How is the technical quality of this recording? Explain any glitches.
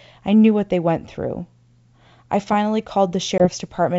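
There is one glitch, near the end of the speech. Packet loss on an ADPCM call occurs from 3.38 to 3.48 s. About one packet, 20 ms of audio, drops out and is replaced by silence. The decoder's adaptive predictor and step size then drift out of step with the sender's, so after the hard-edged gap the speech comes back with brief, slight distortion, settling by about 3.48 s.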